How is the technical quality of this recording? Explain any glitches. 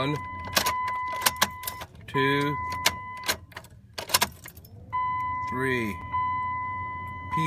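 There is one glitch, a block of digital silence at about 6.01 s. For roughly 5.8 ms the signal drops straight to silence and then resumes, with no fade on either side. That length fits a 256-sample buffer that was not filled in time, so the output carried zeros instead of sound. Because the step into and out of silence is so abrupt and the hole is this short, it is heard as a single tick rather than a noticeable gap.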